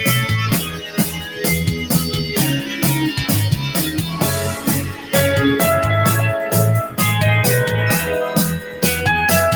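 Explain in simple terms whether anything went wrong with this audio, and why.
Noise suppressor applied to music or sounds, throughout the clip. A filter built to clean up speech stayed switched on and treats steady, lingering sound as background noise. It keeps turning that sound down and back up, so the level pumps and the sound feels thinner.

Sound cut by the noise suppressor, from 0.6 to 1.43 s, 4.91 to 5.14 s and 8.6 to 8.83 s. At these moments the filter mistook part of the sound for noise and pushed it down noticeably. Held or fading parts sink and end early.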